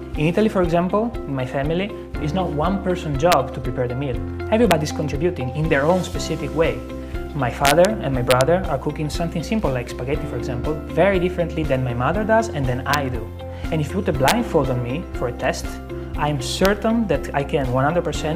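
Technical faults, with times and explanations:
3.32, 4.71, 7.65–7.85, 8.31–8.41, 12.94, 14.28–14.31 and 16.65 s, integer overflow: the sample values of loud peaks ran past the largest integer and wrapped to the opposite sign instead of being limited. Even though these peaks were only about 0 to 3 dB over the limit, each one flips across the full range, so it is heard as a violent crack much sharper than ordinary clipping.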